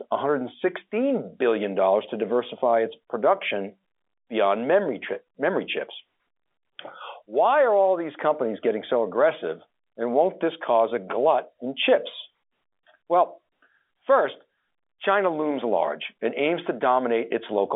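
Speech over a telephone line, with no faults heard.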